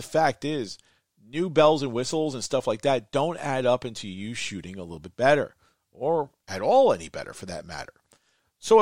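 No technical faults can be heard anywhere in this speech recording. Nothing in the audio breaks, stalls or shifts at any point.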